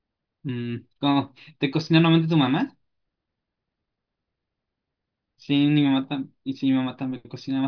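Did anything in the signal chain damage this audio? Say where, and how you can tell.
No, nothing in the signal chain has audibly damaged this speech recording, and no stage from capture to playback has left a trace that can be heard.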